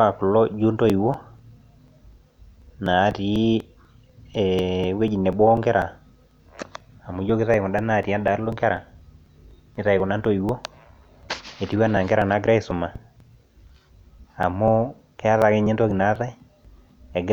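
Speech carrying periodic USB or driver dropouts from 0.90 s to 17.14 s: every 0.246 s a few milliseconds of audio are skipped, giving evenly spaced ticks heard only during speech. A waveform shows small regular discontinuities; a spectrogram shows thin vertical broadband lines at equal spacing.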